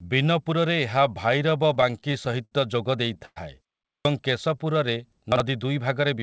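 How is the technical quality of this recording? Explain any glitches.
The recording has five distinct glitches packed into about six seconds, most of them typical of audio received over a call link. The band stops at 8 kHz, which fits a wideband call codec such as G.722 at 64 kbps.

Between 1.50 and 2.53 s the speech drags and hiccups in a run of repeated stalls (stutter). There are ten small holes, the longest about 65 ms, totalling about 155 ms, roughly 15% of that stretch. Packets were arriving more slowly than they were played out, so the jitter buffer kept running dry. Each time, the receiver stretched the last sound to cover the gap. Nothing is lost, but the rhythm is broken.

From 3.25 to 3.38 s there is a brief call audio freeze. The sound hangs as a smeared continuation for about 108 ms and ends in roughly 30 ms of silence before the speech picks up exactly where it stopped. The likely cause is packets held up in transit, which emptied the buffer and pushed the playout delay later by that same 108 ms. 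A gap is inserted, but no content is missing.

At 3.88 s, after a pause of about 0.34 s, the next phrase bursts in abruptly without its beginning. This is a clipped start after a pause. About 168 ms, up to 4.05 s, is swallowed because the output device had gone idle during the silence and needed time to wake up and lock again. The opening sounds of that phrase are simply gone.

Between 4.49 and 4.99 s the speech sounds slightly drawn out while its pitch stays the same. This is a jitter buffer slow-down, running at about 89% speed. The receiver was building up a reserve by repeating individual pitch cycles and fragments of pauses, which adds about 59 ms in total. The result is stretched syllables.

Around 5.32 to 5.40 s there is a short jumbled moment, caused by chunks out of order. A 40 ms block of audio arrived one chunk late and was played after the block that should have followed it. 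No audio is lost, but the sequence is scrambled for an instant, with hard joins at the swap points.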